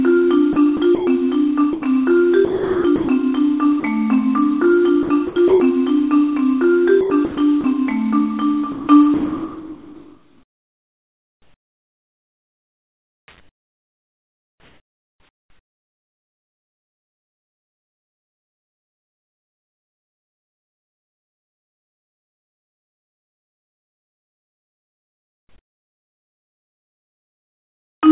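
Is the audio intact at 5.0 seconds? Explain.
No. From 5.03 to 5.6 s the sound is chopped by the voice detector, likely because the sender's voice activity detection repeatedly switched between sending and not sending. Across that stretch, about 270 ms of real sound is replaced by synthetic comfort noise of the RFC 3389 kind, so the sound is cut into gaps where a bland noise bed stands in for the original. That happens over a band that already stops at 4 kHz on this narrowband call path.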